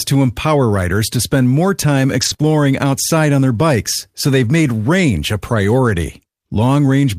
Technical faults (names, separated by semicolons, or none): lost packet rebuilt from error correction; short concealed packet loss